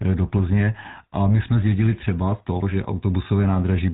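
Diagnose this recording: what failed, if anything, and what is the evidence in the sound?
A buzzy, gravelly roughness colours the speech from start to finish, with nothing audible above 4 kHz. The codec stage is at fault: GSM full-rate coding, plausibly at 13 kbps, models the vocal tract and drives it with a sparse pulse excitation, leaving plainly audible damage.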